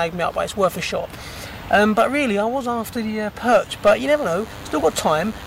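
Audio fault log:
4.05 to 5.47 s, DECT cordless phone buzz: a thin, steady buzz comes in and runs to the end, pulsing at 100 Hz with lots of harmonics, roughly 20 dB under the main signal. A nearby DECT handset or base is bursting every 10 ms, and the audio circuitry is rectifying it.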